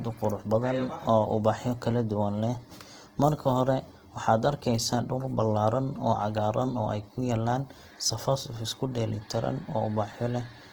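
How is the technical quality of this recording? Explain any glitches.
The quality is held back by codec damage. Throughout the speech there's plainly audible Opus compression, likely from the CELT music mode at around 16 kbps, with starved bands refilled by noise, leaving tones grainy and rough.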